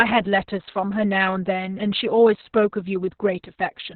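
From start to finish the speech carries heavy Opus voice compression. Nothing reaches above about 4.4 kHz, so it sounds muffled and telephone-narrow. Unlike a simple low-pass filter, the SILK coder also rebuilds the excitation coarsely, in long 60 ms frames, adding a hoarse, faintly robotic buzz. Damage this severe fits a bitrate around 6 kbps.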